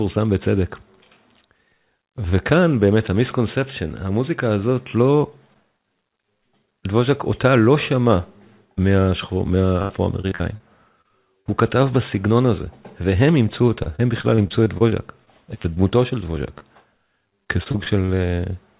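From 9.82 to 10.62 s the audio breaks into repeated packet loss (robotic sound). Five gaps, the longest about 74 ms, are each patched by extending the last sound, so roughly a quarter of that stretch is synthetic and comes out choppy. Short concealed packet loss follows at 11.02–11.06, 11.08–11.11 and 11.41–11.47 s. Each is a single isolated hole of a few hundredths of a second, bridged and blended back, so it is heard as one brief smear or wobble rather than a sustained robotic texture. The robotic pattern returns from 13.83 to 15.78 s with twelve smaller gaps, none longer than about 28 ms, giving choppy sound with pieces missing. Another isolated smear comes at 16.58–16.62 s. A final robotic stretch runs from 17.44 to 18.10 s with five gaps. Throughout, the call path's band stops at 4 kHz, which fits 64 kbps G.711 mu-law.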